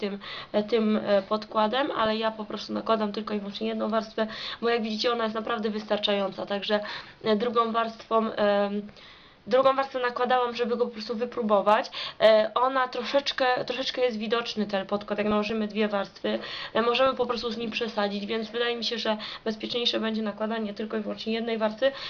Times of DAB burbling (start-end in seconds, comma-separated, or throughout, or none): 1.98-2.06, 15.19-15.52, 17.06-17.61, 20.68